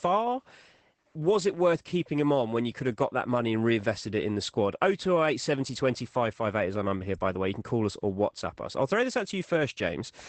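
Throughout the speech, Opus voice compression is plainly audible. The SILK coder has cut everything above about 8.8 kHz and coded the excitation coarsely, which fits a rate near 12 kbps, leaving the sound muffled, hoarse and faintly robotic.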